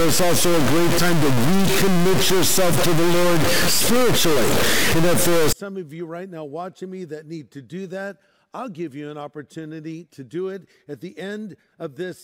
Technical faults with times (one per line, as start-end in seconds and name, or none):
0.00-5.53 stuck bit